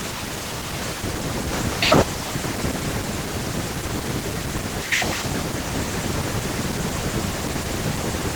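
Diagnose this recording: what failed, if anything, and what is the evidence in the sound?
Codec stage: Opus voice compression throughout. Speech sounds hoarse and faintly robotic yet still reaches 20 kHz, unlike a lowpass fault, which fits 16 kbps hybrid mode.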